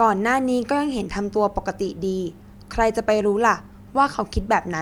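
Speech recording with no technical faults to report.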